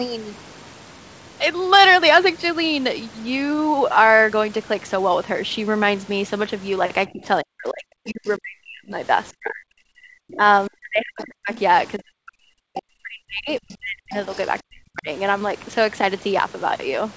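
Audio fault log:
7.07–8.95, 9.31–11.57, 11.98–14.14 and 14.62–15.08 s, speech suppressed in double talk: the talker keeps dipping and cutting out in pieces, with drops of around 40 dB. This is likely the echo canceller ducking everything while both sides talk at once.
10.32–10.36, 11.18–11.59 and 14.13–14.47 s, other side's voice leaking through: there are short scraps of a second voice roughly 20 to 25 dB under the talker. These are likely loudspeaker echo that the canceller didn't fully remove from the mic.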